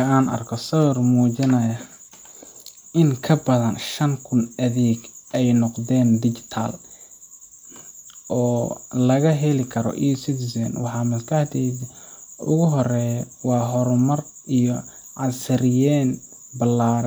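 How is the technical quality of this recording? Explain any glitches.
The recording has no technical glitches to explain. Nothing in the speech audio stands out as a fault at any point.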